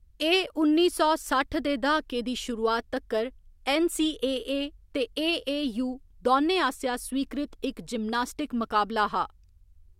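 Speech recording with no technical faults to report.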